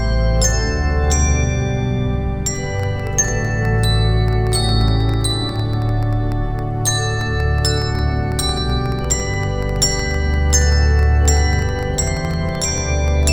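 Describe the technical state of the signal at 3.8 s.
A train of clicks runs from 2.80 to 13.28 s, irregular, about 8 per second. Likely interference injecting pulses. They tick at roughly signal level.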